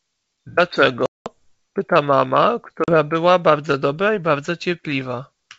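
Speech on a wideband G.722 call shows packet loss on an ADPCM call: hard-edged silent gaps at 1.06–1.29 s (about 200 ms) and 2.84–2.92 s (about 40 ms). After each gap, the speech returns slightly distorted while the decoder's predictor resynchronises.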